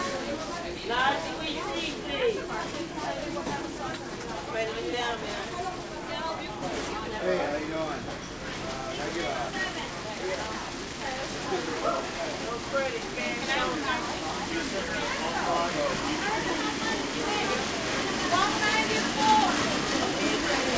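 Nothing here goes wrong; the sound comes over a call path that looks like G.722 at 64 kbps, which is why there's nothing above 8 kHz, and that's simply how that codec carries audio.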